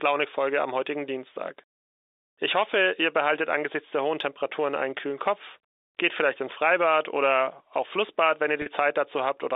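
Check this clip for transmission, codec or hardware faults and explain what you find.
One transmission fault is audible: packet loss with pitch repetition, near the end of the clip, from 8.62 to 8.66 s. About 40 ms of audio went missing, which fits two lost 20 ms packets. The receiver filled the gap by repeating the last pitch period, so the sound briefly holds on a slightly buzzy, frozen tone before normal audio resumes. On a waveform the gap shows as identical repeated cycles. A spectrogram shows flat, unchanging harmonics there, all within the G.711 telephone band.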